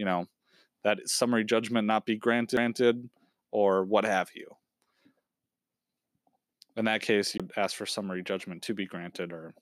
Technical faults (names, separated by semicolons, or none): CD skip